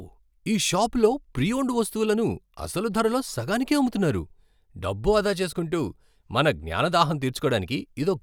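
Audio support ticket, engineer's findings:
No faults found on listening; playback path and signal chain show nothing to trace in this speech recording.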